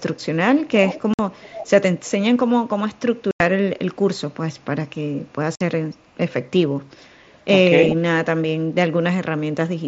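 Speech over a wideband headset link, mSBC by the sound of it, with two problems. First, faint to fairly loud echo leak, a copy of the voice trailing about 355 ms behind at 0.17–0.23, 0.88–1.02, 1.32–1.7, 7.27–7.44 and 7.87–7.94 s, likely a far-end speakerphone's echo canceller letting some through. Second, unconcealed Bluetooth headset packet loss leaves abrupt silent holes at 1.14–1.19 s (about 52 ms), 3.31–3.40 s (90 ms) and 5.55–5.61 s (52 ms), which fits runs of several dropped headset frames.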